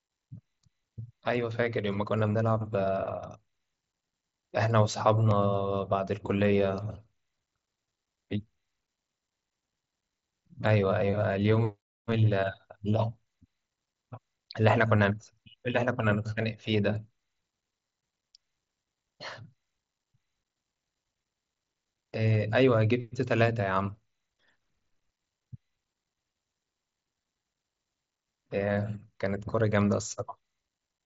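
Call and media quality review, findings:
Nothing stood out on listening to this speech clip, which comes through an mSBC Bluetooth headset path with content reaching up to about 7.6 kHz.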